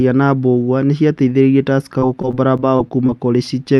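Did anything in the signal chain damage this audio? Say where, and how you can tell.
Yes. The damage happened on the network, in the call path, from 1.99 s to 3.1 s. This is repeated packet loss, heard as a robotic sound. There are seven short holes in that stretch, the longest about 23 ms. Each one is filled by stretching the previous fragment, so the speech turns choppy. About a tenth of that span is concealed sound rather than real signal. The codec itself sounds like super-wideband Opus.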